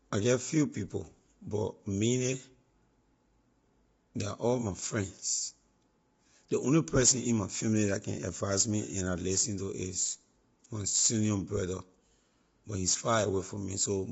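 Throughout the speech, the voice sounds rough and grainy, with noise filling the gaps between harmonics and nothing above about 7.7 kHz. This is likely low-delay AAC compression: short frames resolve pitch poorly, and the damage fits a low bitrate near 24 kbps.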